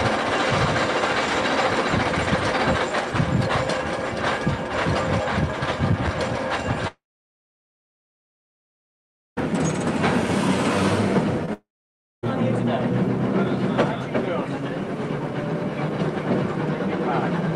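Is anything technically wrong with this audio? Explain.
Yes. The audio has two long network dropouts and one short concealed packet loss.

The first long network dropout runs from 6.87 to 9.39 s. About 2.5 s of audio is missing. The last sound is stretched into a brief fading buzz, and then roughly 2.4 s of silence follows. The audio resumes at 9.39 s with the gap simply gone. The likely cause is a network stall in which incoming audio stopped arriving. The receiver could only extend what it last had, and that extension died away quickly.

The short concealed packet loss sits at 11.46 to 11.49 s. About 20 ms failed to reach the decoder in time. The decoder bridged the hole by continuing the preceding sound and then blending back into the real signal. It is heard as a tiny smear or wobble rather than a gap.

A second long network dropout follows immediately, from 11.53 to 12.25 s. About 0.7 s is lost. 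A short fading fill gives way to roughly 0.6 s of silence, and then the sound picks up again further on.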